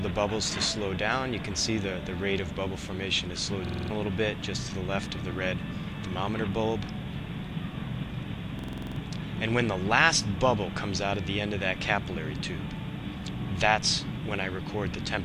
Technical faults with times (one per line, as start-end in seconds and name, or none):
3.67-3.90 system hang loop
8.59-8.96 system hang loop